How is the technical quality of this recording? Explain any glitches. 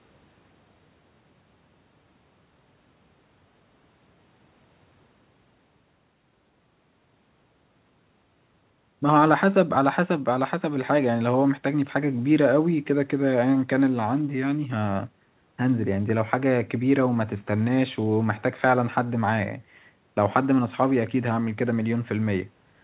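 No glitches to explain here: the speech comes over a normal phone-style call path, with the band topping out around 4 kHz as G.711 does.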